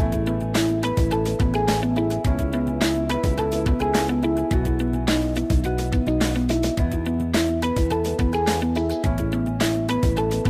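Nothing stood out on listening to this recording.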